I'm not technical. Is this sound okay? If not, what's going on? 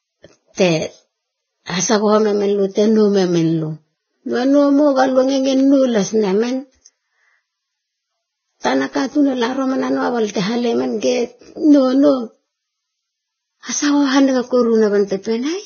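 No. The speech was likely squeezed hard by Vorbis compression throughout, which strips everything above 6.5 kHz and leaves it dull, hissy and grainy, with smeared consonants.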